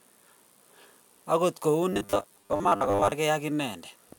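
A speech clip with robotic sound from repeated short buffers. From 1.93 s to 3.12 s the voice turns into a rigid, metallic buzz. It still tracks the words loosely. The buzz sits at a fixed 100 Hz, which fits a segment about 10 ms long being looped. This is likely a playback stage starved of fresh audio. About half of the real signal seems to be skipped and replaced by copies of the last short block.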